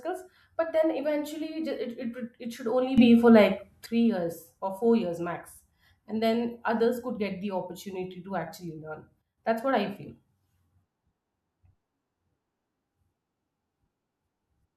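Speech with a sudden gain jump twice: after "it should only", level leaps about 10 dB from 2.98 to 3.86 s, back before "years or four years"; at 9.22 to 9.38 s it drops about 9 dB, ahead of "that's what i feel". Background noise steps with the speech, instantly rather than as a compressor's ramp, likely from unramped gain changes.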